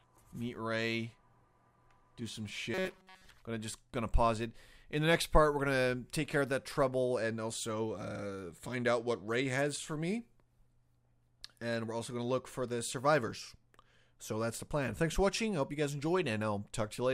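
From 2.74 to 3.29 s the audio takes on a robotic sound from repeated short buffers. Over most of that half-second a short fragment of about 5.3 ms is looped, imposing a rigid, metallic buzz at 188 Hz that only loosely tracks the underlying sound. The likely cause is input arriving too slowly, so the playback path refilled the gap by repeating its last buffer while skipping the real audio.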